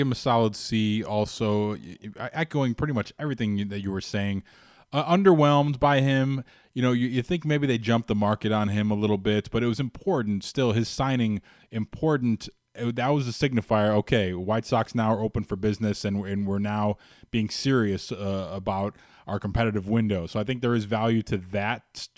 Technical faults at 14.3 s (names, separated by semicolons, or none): none